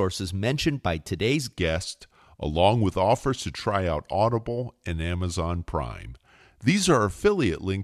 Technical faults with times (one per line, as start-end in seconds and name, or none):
1.57-7.84 section at the wrong speed